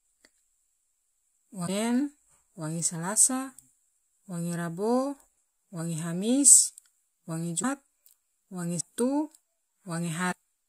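At 1.66, 7.62, 8.79 and 10.31 s, the speech skips forward in glitches of about 30 ms, roughly one 26.1 ms frame. The likely cause is a broken MP3 bit reservoir.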